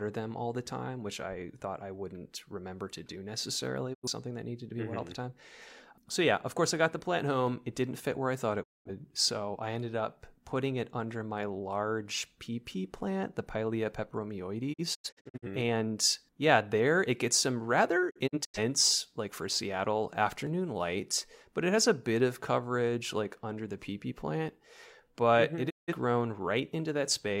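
Speech that briefly fades to silence at 3.93 s (after "remember to do necessarily"), 8.62 s, 14.72 s, 18.09 s and 25.69 s, with the 14.72 and 18.09 s gaps broken into short holes: a digital broadcast dropout, where the receiver mutes through failed frames.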